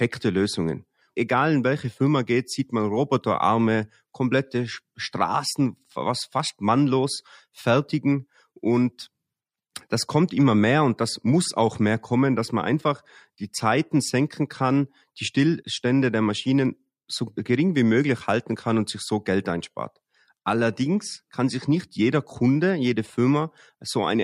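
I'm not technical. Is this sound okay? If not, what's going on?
Yes, nothing in this recording needs fixing.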